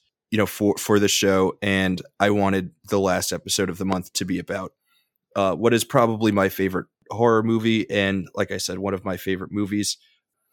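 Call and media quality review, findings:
Loud pop at 3.92 to 3.95 s: a single sharp pop sitting maybe 15 dB above the speech, which carries on underneath. Likely a voltage spike from a plug, switch or static discharge, with the following stages turning it into a short thump.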